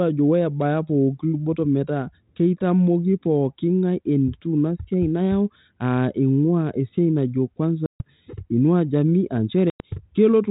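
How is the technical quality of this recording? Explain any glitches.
Two glitches stand out in this telephone-band speech, both from packet loss on an ADPCM call. At 7.86 to 8.01 s about 140 ms drops out, and at 9.70 to 9.81 s about 100 ms, each a handful of packets, filled with hard-edged silence. Because ADPCM sends only differences from an adaptive prediction, the decoder's predictor and step size drift from the sender's. Speech returns with brief, slight distortion that settles within tens of milliseconds. A plain dropout would resume cleanly.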